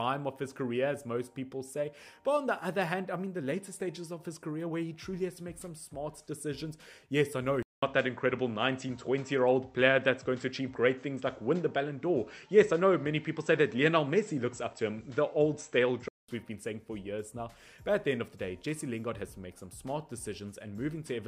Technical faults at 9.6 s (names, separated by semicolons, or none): input switched to a poorer device